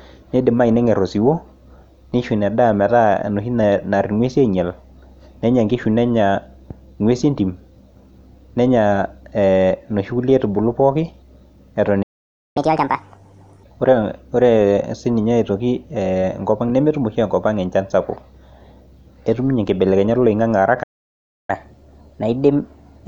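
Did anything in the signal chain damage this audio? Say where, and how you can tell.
Yes, the damage is at the playback stage. The speech cuts out mid-flow twice and falls fully silent: from 12.02 to 12.57 s (about half a second) and from 20.83 to 21.50 s (about two thirds of a second). These are playback stalls, most likely the player's buffer running dry or its output thread being blocked, so nothing reached the output until it recovered.

Right after each gap comes catch-up at higher speed. From 12.57 to 13.63 s the speech runs at 1.5 times normal speed, with pitch raised by roughly seven semitones, so it sounds clearly chipmunk-like. From 21.50 s to the end of the clip it runs at 1.1 times speed, about one and a half semitones sharp, a subtler hurry. The player is resampling its backlog to win back the time lost in the stall, which shifts pitch along with tempo.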